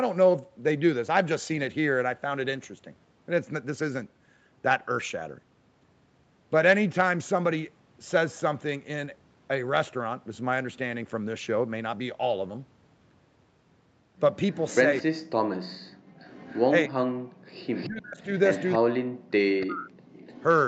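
From 14.53 s to 20.43 s, a faint, delayed double trails behind this speech recording, arriving about 300 ms late and sitting roughly 20 dB below the main talker. This is an echo leak: the far end was likely playing the call over a loudspeaker, and its echo canceller failed to strip out everything its microphone picked up, so a copy travelled back down the line. Overlapping that echo, between 15.02 s and 19.93 s, the talker's own speech repeatedly sags and breaks into pieces, in places dropping by around 40 dB, for roughly a second and a half in total. That is speech suppressed in double talk. With both sides active at once, the canceller likely could not separate the talker from the loudspeaker echo and pulled the whole signal down. From 15.95 s to 17.49 s, the room sound behind the speech also ducks out briefly, falling by about 37 dB for roughly half a second in total before it comes back. 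This is background gated by the echo canceller, which clamped the microphone hard while the loudspeaker was sounding and then released it. Throughout, nothing is heard above 8 kHz, which fits the band limit of an Opus call path running at about 40 kbps.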